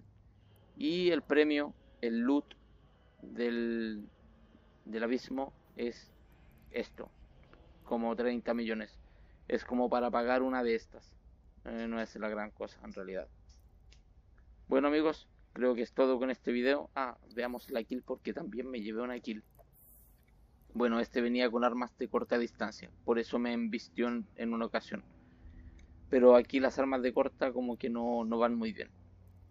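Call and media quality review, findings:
No audible faults found on review of the capture; no dropouts, glitches or level anomalies heard anywhere in the file.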